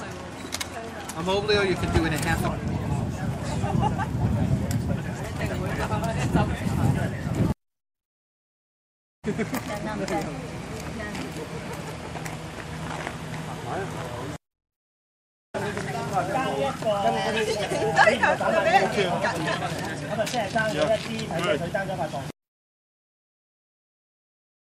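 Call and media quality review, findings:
Nothing to flag here, as no dropouts, glitches or other problems turn up anywhere in the audio.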